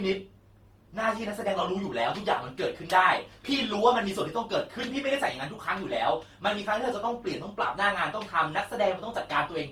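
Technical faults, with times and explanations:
Throughout, generation loss: swirly, hollow and smeared, with blurred attacks; likely from roughly seven re-encodes, which fits Opus near 48 kbit/s, each compounding quantisation damage.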